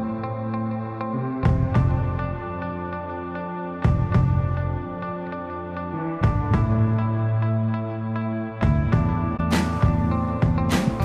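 At 9.37 to 9.40 s a corrupt frame is concealed: a span of about 33 ms, consistent with one damaged AAC frame, is patched by the decoder.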